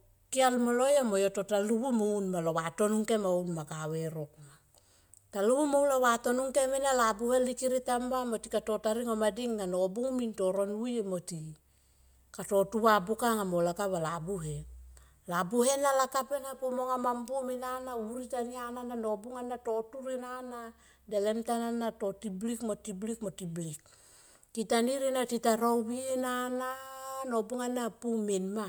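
No faults can be heard anywhere in this speech recording.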